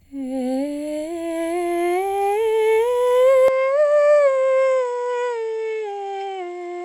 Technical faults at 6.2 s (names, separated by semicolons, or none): input switched to a poorer device